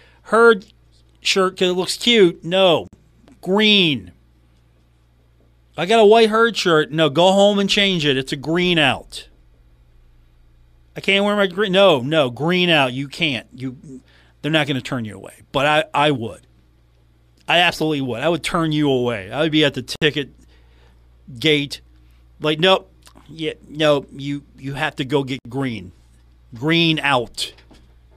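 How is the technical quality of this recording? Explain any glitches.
The recording has three short dropouts in the speech. They are gaps at a join of encoded pieces, at 2.88 s (about 53 ms), 19.96 s (about 62 ms) and 25.39 s (about 64 ms). Separately encoded segments were spliced untrimmed, keeping leading encoder delay and end-frame padding. Each gap cuts in abruptly with smeared edges, then the speech resumes where it stopped.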